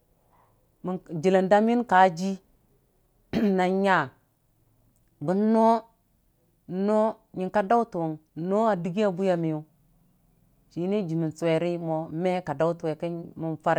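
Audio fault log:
No fault is heard in this speech clip.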